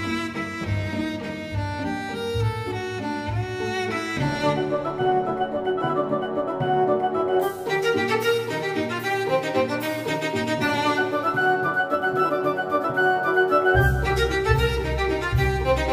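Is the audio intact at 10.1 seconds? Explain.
Yes, at 10.1 seconds the audio is intact, with no dropout, click, distortion or other technical fault at that moment.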